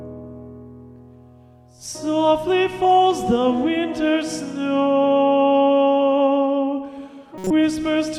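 At 7.38 s to 7.51 s a corrupt frame decoded fault produces a brief burst of misplaced energy lasting about 130 ms, spanning roughly four codec frames. Damaged bits were decoded as wrong gains and spectral codes, giving a chirp or noise burst peaking near -10 dBFS.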